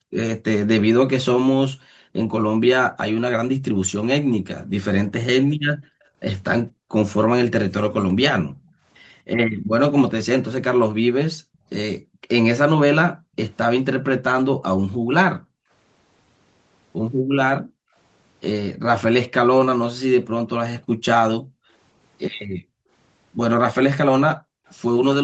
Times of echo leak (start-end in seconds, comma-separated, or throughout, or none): 6.01-8.73, 24.68-24.72